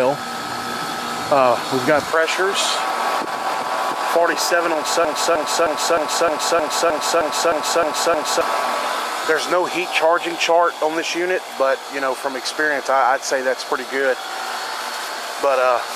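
From 5.05 s to 8.41 s the audio locks into a broken-record loop: a 309 ms fragment repeats exactly, back to back, about eleven times. The likely cause is a stalled player or stream resending its last buffered piece, so the intended audio for that span is lost.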